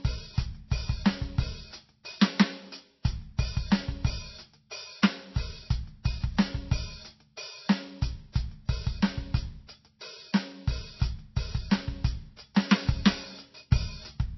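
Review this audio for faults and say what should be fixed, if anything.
MP3 compression is the likely cause of damage audible throughout the whole clip. The music has nothing above about 5.8 kHz, a hard treble ceiling where the encoder discarded everything higher to save bits. The coding damage below that cutoff is plainly audible, as weak frequency components were dropped frame by frame. A ceiling that low, with damage this obvious, fits a very low bitrate, around 24 kbps. To prevent it, start from the original or a lossless source, or re-encode at a far higher bitrate.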